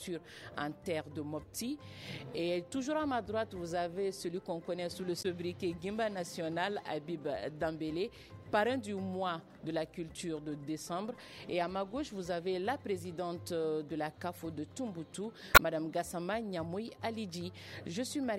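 At 5.19 to 5.26 s and again at 15.53 to 15.60 s, damaged data in the compressed stream yields a 70 ms glitch as the decoder misreads corrupted frames, loses sync and hunts for the next header. On a spectrogram each shows as a narrow broadband smear, with an abrupt discontinuity in the waveform.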